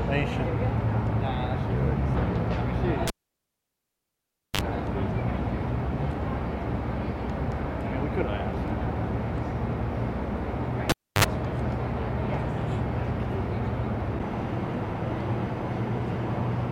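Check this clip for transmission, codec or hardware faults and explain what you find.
Two cable pulled and plugged in faults: at 3.08 to 4.61 s, a pop, 1.49 s of near silence, then a 49 ms burst of 50 Hz buzz and a second pop; at 10.90 to 11.24 s, the same pattern with 0.30 s of silence and 57 ms of buzz. A live connector was pulled and reinserted, and while only the tip made contact the unshielded line picked up mains hum.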